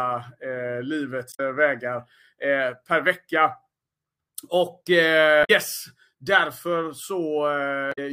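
At 1.29 to 1.40 s, 5.41 to 5.50 s and 7.89 to 7.99 s the speech breaks up briefly, each break about 0.1 s long. This is damaged data in a compressed stream: corrupted bytes throw the decoder out of sync until it finds the next valid frame header.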